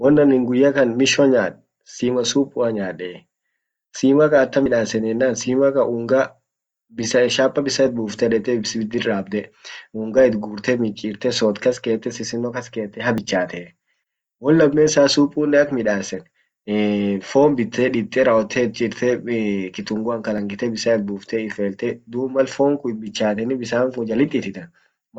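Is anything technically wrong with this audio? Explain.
Yes. A dropped buffer (overrun) occurs at 4.66 s, 13.18 s and 20.38 s: each is heard as the speech jumping forward, losing about 40 ms, 20 ms and 40 ms. The likely cause is samples not collected before the hardware overwrote them, splicing the surrounding audio together.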